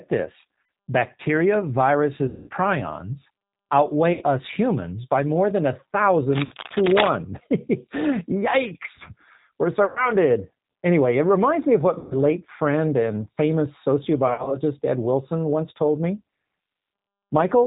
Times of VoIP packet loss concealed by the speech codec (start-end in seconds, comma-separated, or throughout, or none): 0.63-0.69, 2.28-2.51, 4.13-4.24, 6.45-6.54, 9.86-10.09, 11.99-12.15, 14.28-14.59